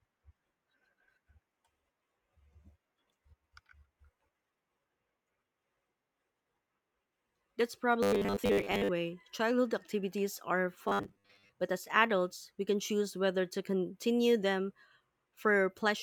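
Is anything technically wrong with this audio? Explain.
Yes, there is robotic sound from repeated short buffers, from 8.03 to 8.89 s and again from 10.88 to 11.49 s. The speech becomes a rigid metallic buzz at 100 Hz, which fits a 10 ms stretch of audio being looped. The likely cause is new audio arriving too seldom, so most of the incoming speech is skipped while that stretch repeats. Unlike a dropout, there is no silence.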